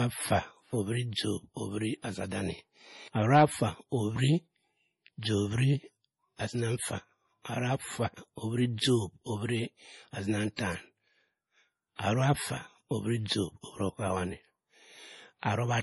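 Throughout the speech, a heavily starved encoder, likely MP3 compression at a bitrate consistent with about 32 kbps, drops everything above 11.5 kHz and discards weak frequency lines that flicker between frames. The result is dull, watery, swirling audio with metallic chirps on s sounds.

The same block-based coding causes pre-echo at 2.02 to 2.04 s, 6.36 to 6.39 s, 10.56 to 10.59 s and 11.95 to 11.99 s. Quantisation noise meant for a sharp attack spreads back 22 to 38 ms into the quiet before it, so each onset gets a brief hiss and sounds smeared.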